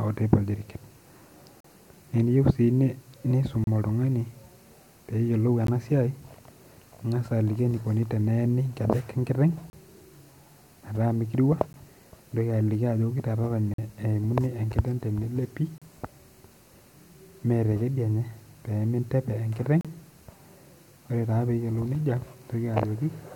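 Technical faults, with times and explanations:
1.60–1.64 s, 3.64–3.67 s, 5.67 s, 9.70–9.73 s, 11.73 s, 13.74–13.78 s, 15.78–15.82 s and 19.81–19.85 s, gap between stream segments: the speech drops into hard-edged silence for about 13 to 46 ms, on a roughly 2 s beat that matches the 2.0 s segment length. The segment timestamps don't quite meet, so the player pads each seam with silence. Nothing is cut out. Everything after each gap just lands a little later.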